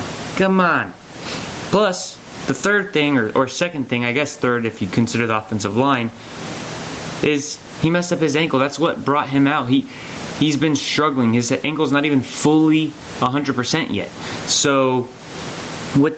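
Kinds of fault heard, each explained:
Gain pumping: Every time the speech gets loud, the level gets yanked down, and this goes on for the whole clip. The swing is big, something like 25 dB, and loud and soft syllables end up squashed close together. The likely cause is input gain set far too hot, with a fast limiter or compressor clamping down on each peak.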